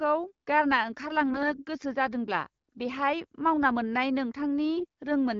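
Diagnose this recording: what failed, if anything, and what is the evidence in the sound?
The fault sits in the radio link feeding the AMR-WB decoder: AMR bit errors. From 1.30 to 1.64 s, and again from 4.77 to 4.85 s, the speech keeps roughly its pitch and level but turns hoarse, scratchy and gargly, harsher in the second burst. Flipped low-priority bits misplace the excitation pulses and skew fine gain and spectral values. Unlike packet loss, nothing drops out or fades into concealment; the frames still decode, just wrongly.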